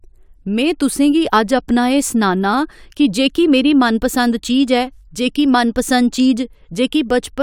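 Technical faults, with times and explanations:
The speech signal plays continuously with no dropouts, distortion, noise bursts or timing irregularities anywhere in the clip.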